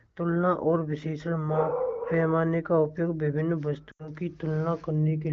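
At 3.92 s the speech runs into lost AMR speech frames, a gap of about 80 ms (which fits four 20 ms frames) ending at 4.09 s. The wideband decoder, which is carrying the speech lightly coloured, bridges the gap by repeating its last good pitch and vocal tract settings while ramping the gain down, so the sound smears into a short, fading buzz. On a spectrogram the harmonics stretch flat and dim; the waveform envelope tapers before speech resumes.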